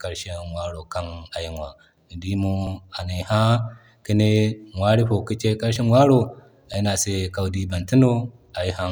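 Speech with three abrupt jumps, at 2.67 s just before "anay ha", at 5.76 s right after "no ka ci ay", and at 6.74 s just before "ne a se kawi". Each is likely a dropped buffer (overrun): roughly 15 ms vanishes and the sound jumps straight ahead, with no silent gap as in a dropout.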